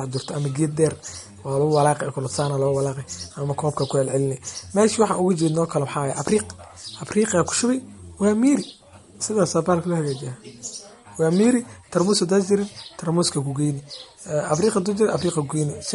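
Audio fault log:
throughout, MP3 compression: the speech has a watery, swirly quality with smeared consonant onsets and nothing above about 11.2 kHz, likely from a low bitrate around 48 kbps. The encoder discards treble and toggles weak frequency lines frame to frame. A spectrogram shows a hard ceiling and flickering holes.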